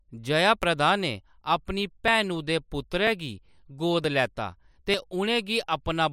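Small skips in the speech occur at 0.63, 2.08, 4.04 and 4.94 s, likely dropped buffers (overrun) losing roughly 10 ms each for the first three and 30 ms for the last.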